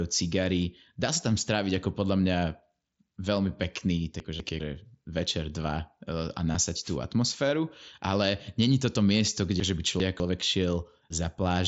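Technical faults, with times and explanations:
4.2–4.6 s and 9.6–10.2 s, chunks out of order: a 200 ms chunk plays one chunk late at 4.2 s and two chunks late at 9.6 s, so the sound jumps and jumbles at each event's three hard joins. The waveform shows abrupt steps, and the spectrogram shows thin vertical broadband lines where the formant tracks break and restart.
6.52–6.55 s, concealed Bluetooth headset packet loss: about 22.5 ms of audio went missing, which fits three lost frames. The receiver filled the gap by repeating a stretch of the preceding waveform, giving a brief buzzy blip at full level. The spectrogram shows evenly spaced, flat harmonic stripes and a slight smear where real audio resumes.
6.82–6.97 s, wireless microphone noise hit: the FM radio link faded for about 150 ms, and receiver noise rose over the sound as a short swish of static. The spectrogram shows a broadband haze filling the gaps between harmonics, and the waveform shows a fuzzy noise floor across that span.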